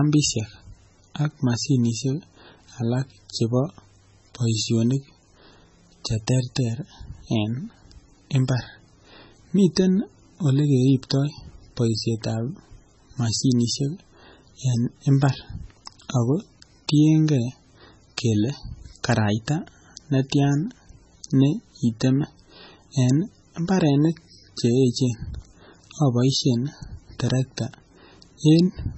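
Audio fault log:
Throughout: MP3 compression is the likely cause, with damage heavy enough to fit a stream around 16 kbps. The band stops at 8 kHz, dulling the speech, and weak frequency lines flickering between frames give a watery, swirling texture and smeared onsets.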